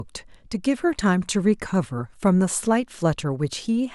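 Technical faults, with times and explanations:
No technical faults detected.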